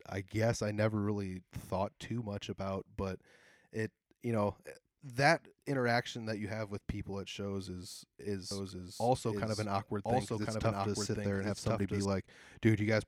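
From 8.51 s to 12.05 s there's a doubled audio track: a second copy of the speech runs about a second behind, at roughly the same level, with no reverb tail. It starts and stops abruptly, likely from a slower capture path recording it twice.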